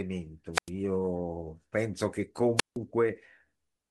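At 0.53 to 0.70 s and again at 2.57 to 2.77 s the speech breaks up in a wireless microphone squelch dropout. The weakening FM signal brings up a brief rush of hiss before the receiver mutes for about 98 ms and then 163 ms. That preceding static sets it apart from a clean digital dropout.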